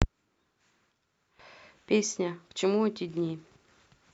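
No technical faults can be heard in the speech.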